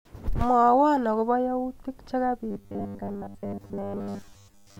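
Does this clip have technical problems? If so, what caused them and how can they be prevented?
Yes. From 2.51 s, after "akobo yautik", to the end, the speech turns into a rigid 100 Hz buzz. This is robotic sound from repeated short buffers, likely a 10 ms block replayed while most incoming audio was skipped. A larger playback or jitter buffer prevents this by keeping audio on hand when delivery is late.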